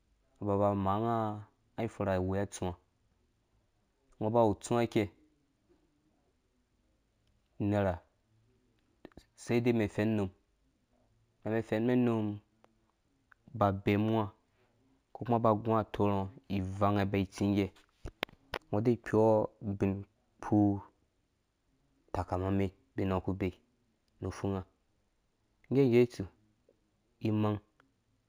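Imaging from linear upsampling runs throughout: straight-line interpolation from 16 kHz to 48 kHz leaves faint mirror images between 8 and 16 kHz, about 35 dB down, heard as metallic shimmer.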